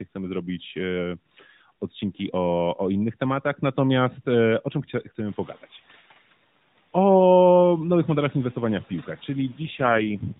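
Noise suppressor catching up, 5.28 to 5.58 s: room noise jumps by about 18 dB around 5.5 s, leaks through briefly, then sinks by about 5 dB as the estimate adapts over 300 ms.

AMR rate drop, 9.62 to 10.40 s: the speech turns rougher and more synthetic without losing band or continuity, which fits the codec falling from 12.2 to 4.75 kbps.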